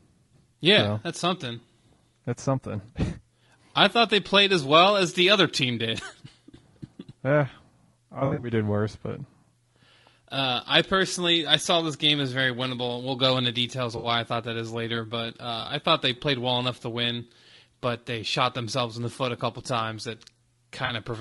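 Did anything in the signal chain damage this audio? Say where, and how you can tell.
Yes. At the codec stage, the speech is rough and grainy throughout, with noise between harmonics and a dulled top band, likely low-delay AAC compression at around 32 kbps.

AAC frame loss with concealment in transmission: smeared, phasey patches at 8.19–8.51 s before "worse but", at 13.97–14.07 s between "go into details of" and "I thought that is", and at 20.85–20.91 s.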